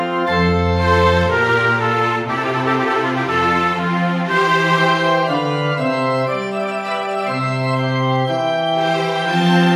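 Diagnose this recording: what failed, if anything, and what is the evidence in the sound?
Nothing here points to a failure at any stage of the chain, from the wiring and converter through to storage and playback, so there's nothing to diagnose and no evidence of a fault in the sound.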